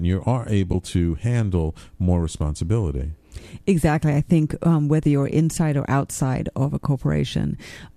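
A brief, soft-edged dropout in this speech recording occurs at 0.73 s, between "you are" and "to handle more responsibility": the sound fades out and back in. This is AAC frame loss with muting. The decoder zeroed the missing spectrum, and the overlapping windows smoothed the gap, which fits a single lost frame of about 10 ms. The light coding grain throughout is likely from low-delay AAC compression.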